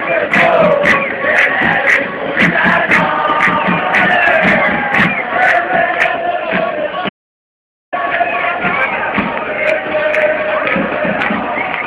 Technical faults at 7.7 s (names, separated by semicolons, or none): audio dropout to silence